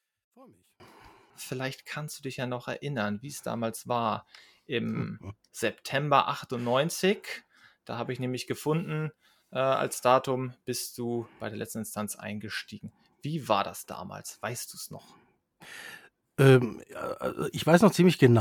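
A speech recording opens with its first 0.8 s almost cancelled in mono, dropping about 35 dB to a faint residue before the level returns. One channel inverted is the likely cause. The waveform shows a near-flat trace there, and the spectrogram a darkened, hollow band.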